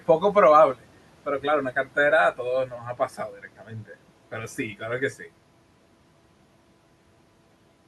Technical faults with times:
2.67-3.95 speech cut by the noise suppressor

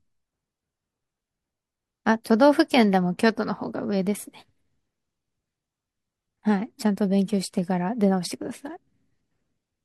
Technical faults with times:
none

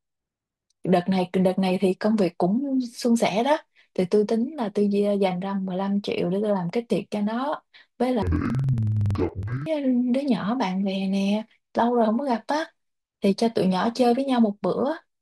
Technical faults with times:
8.22-9.71 interleaved audio read as planar

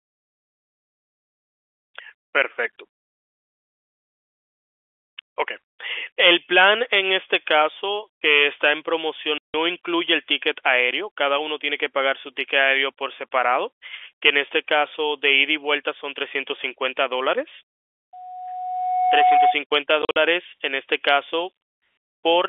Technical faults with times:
9.38-9.54 packet loss filled with silence
18.13-19.60 loudspeaker feedback squeal
20.02-20.16 packet loss filled with silence

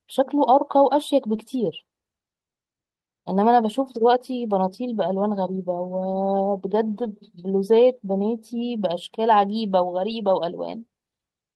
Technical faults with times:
1.33-1.35 lost packet rebuilt from error correction
3.83-3.97 lost packet rebuilt from error correction
6.11 lost packet rebuilt from error correction
6.95-7.05 lost packet rebuilt from error correction
10.09 lost packet rebuilt from error correction

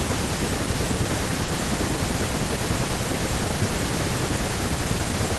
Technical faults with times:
1.44-1.50 short concealed packet loss

